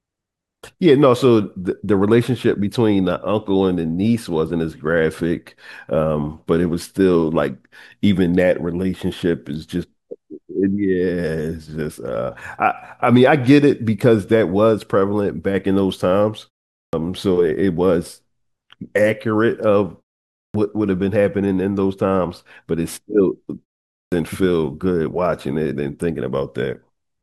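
At 16.76, 20.35 and 23.92 s, speech bursts abruptly out of short pauses with its opening 170 to 200 ms missing: a clipped start after a pause, as the sleeping output device wakes too late.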